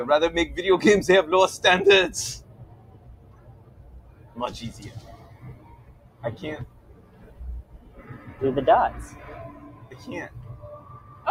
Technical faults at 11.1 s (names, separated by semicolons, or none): noise suppressor applied to music or sounds; sound cut by the noise suppressor